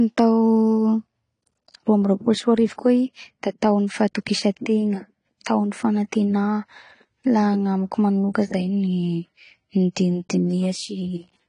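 Throughout, the speech sounds dull and smeared, with nothing above 10 kHz. Sibilants fizz and warble. This is likely AAC compression at a low bitrate, around 32 kbps.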